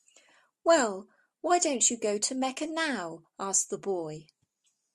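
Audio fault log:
No faults are heard anywhere in this speech recording. Nothing in it calls for an entry in the log.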